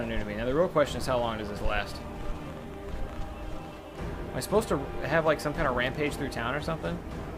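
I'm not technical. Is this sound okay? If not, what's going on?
No. Between 1.50 and 3.17 s, something likely interfering with the recording equipment injects a train of clicks: about fifteen similar ticks, roughly ten per second at an uneven pace, each as loud as the sound itself.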